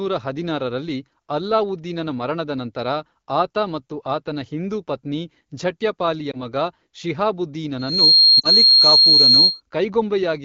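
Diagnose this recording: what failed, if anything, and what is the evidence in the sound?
Lost AMR speech frames, network stage: radio errors made frames fail their checksum. At 6.31 to 6.37 s, right after "ಆತನ ಹಿಂದೂ ಪತ್ನಿ ಝಟ್ಯಪಾಲಿಯ", one 20 ms frame is missing, heard as a brief dip or warble. At 8.40 to 8.49 s two frames (40 ms) drop. The AMR-WB decoder, running at 12.65 kbit/s, repeated the last pitch and vocal-tract settings at falling gain. On a spectrogram, the harmonics freeze and fade. In the waveform, the envelope sags.

Loudspeaker feedback squeal, acoustic path: a microphone picked up the loudspeaker it was feeding. At 4.2 kHz the loop gain exceeded one, so that frequency reinforced itself. From 7.78 s a single tone swells over about 0.3 s to roughly 10 dB above the speech, then holds until 9.61 s. A spectrogram shows one bright horizontal line at 4.2 kHz, and the waveform envelope thickens into a steady sinusoid riding over the speech.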